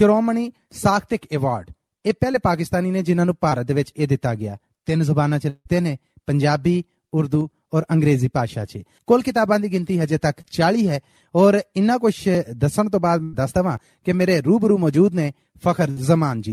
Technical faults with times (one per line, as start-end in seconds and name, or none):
2.31-2.35 short concealed packet loss
3.49-3.53 short concealed packet loss
5.49-5.67 long network dropout
7.41 dropped buffer (overrun)
10.41-10.45 short concealed packet loss
12.35 dropped buffer (overrun)
13.23-13.35 burst of packet loss
13.77 dropped buffer (overrun)
14.94 dropped buffer (overrun)
15.91-15.98 burst of packet loss